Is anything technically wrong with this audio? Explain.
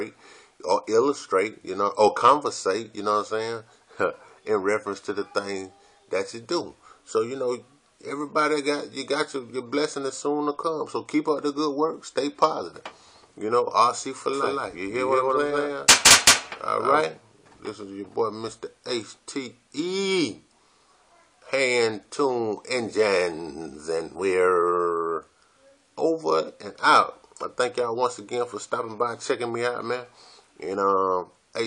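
Yes. From 14.33 s to 17.01 s there is a doubled audio track: a second, full-band copy of the sound trails the original by roughly 150 ms at about the same level. The likely cause is the signal being captured a second time through a slower path, or an edit leaving two copies out of step. The copy has no decay or room colour, so it reads as a distinct repeat rather than reverb, and it starts and stops abruptly at those two times.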